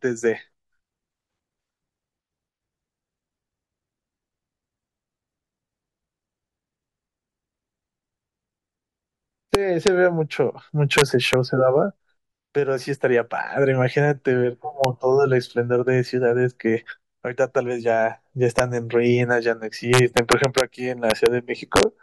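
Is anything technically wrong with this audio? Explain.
Yes. The speech carries integer overflow at seven points: 9.55–9.88 s, 10.98–11.33 s, 14.84 s, 18.59 s, 19.94–20.60 s, 21.10–21.26 s and 21.76–21.83 s, with peaks pushed about 0 to 4 dB past full scale. Instead of saturating, the samples wrap to the opposite extreme, so loud syllables snap into harsh, violent cracks far sharper than clipping. The waveform shows peaks jumping rail to rail, and the spectrogram shows bright broadband vertical streaks at each crack.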